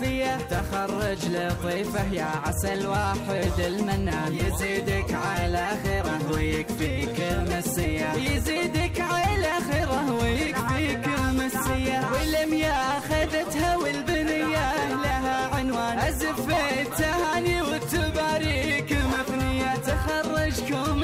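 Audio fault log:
No technical faults can be heard anywhere in the signal.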